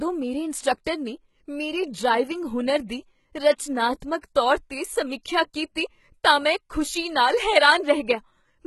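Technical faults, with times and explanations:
Throughout: HE-AAC compression, likely the cause of the synthetic treble. Nothing is heard above 11.8 kHz. The codec damage is heavy, which points to a very low bitrate, around 16 kbps. Only the lower band of the speech is truly coded. The treble is rebuilt by copying lower bands upward and shaping them roughly. That copied treble does not match the real harmonics. So s sounds and other hissy consonants come out gritty, metallic or lispy.
4.00 s: pre-echo, just before "ਤੌਰ 'ਤੇ". A short hiss, about 18 ms long, leads into a sharp onset. The codec spreads its quantisation noise across a whole block. Here the attack falls late in that block. Noise sized for the loud attack therefore also fills the quiet gap before it. The hiss arrives early, and the onset loses its crispness. It sounds softened and smeared rather than clean.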